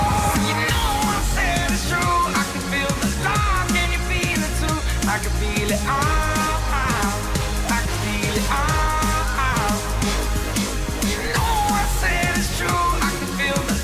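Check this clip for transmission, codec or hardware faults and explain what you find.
Nothing in the clip points to a problem in how it was sent, encoded or captured. There is no event here that needs explaining.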